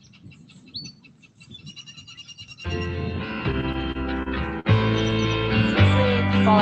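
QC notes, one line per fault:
Throughout: noise suppressor applied to music or sounds. Held tones and tails get mistaken for noise and pulled down, swinging level by around 10 dB. The spectrogram shows sustained bands flickering and breaking up.
0.00–2.55 s: sound cut by the noise suppressor. Steady content sinks by up to about 12 dB for roughly two seconds. The waveform envelope is visibly hollowed, with clipped-short decays.
3.51–4.67 s: repeated stalls (stutter). The jitter buffer ran dry six times, the longest wait 49 ms, with sound stretched to cover. The spectrogram shows smeared, repeated frames.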